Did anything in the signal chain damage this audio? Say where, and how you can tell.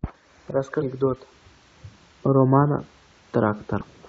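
Yes. Two brief glitches interrupt the speech at 0.80–0.82 s and 3.80–3.82 s. This is damaged data in the compressed stream, a codec-stage fault: corrupted bytes made the decoder misread frames and lose sync until it found the next frame header.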